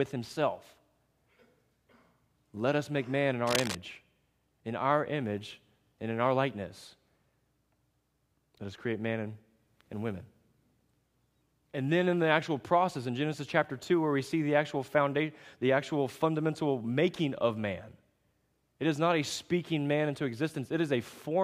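At 3.46 to 3.77 s, just after "us make man in", a burst of cable scratch noise runs over the speech: dense, irregular crackling only a few decibels below the voice, most likely from a worn cable or connector being moved while its contact resistance fluctuated.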